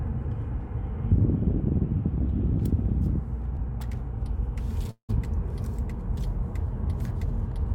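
At 3.55 to 3.59 s there is a short concealed packet loss. About 20 ms of audio never arrived in time, and the receiver patched roughly 13 ms by extending the preceding sound before blending back. It is heard as a tiny smear or wobble. On a spectrogram it shows as a thin blurred vertical strip.

From 4.91 to 5.11 s the sound breaks off for about 180 ms, likely a long network dropout. The last sound is stretched into a fading buzz or hiss, leaving about 90 ms of silence before the audio resumes further on, with that stretch lost. A waveform shows a decaying tail and then a flat gap.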